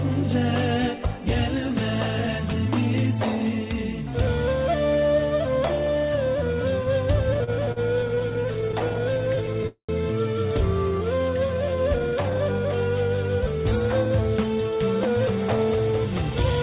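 From 7.34 to 9.67 s the sound drags and catches in a run of repeated stalls (stutter): 26 brief holds, the longest 42 ms, about 320 ms in all. Packets kept arriving late, so the jitter buffer repeatedly emptied and the receiver stretched the last sound until it could continue. Nothing is lost.

Right after, from 9.67 to 9.92 s, a call audio freeze holds the sound as a fading buzz or hiss that sinks into about 100 ms of silence before playback resumes where it stopped. Its likely cause is packets held up in transit, draining the jitter buffer and adding 217 ms of delay.

Between 10.98 and 12.35 s the sound runs at 86% speed at unchanged pitch, drawn out. This is a jitter buffer slow-down: to rebuild its reserve, the receiver repeated single pitch periods again and again, adding 201 ms.

From 14.05 to 16.31 s the sound turns hurried, running at 108% speed with pitch intact. This jitter buffer speed-up trims the excess delay by cutting out short pitch-period slices, about a fifth of a second in total. 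Throughout, nothing above 4 kHz comes through, which fits the G.711 mu-law call codec at 64 kbps.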